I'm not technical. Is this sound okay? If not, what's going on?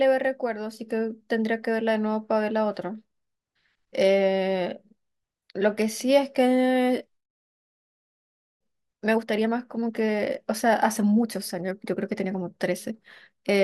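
Yes, I hear no technical faults in this audio.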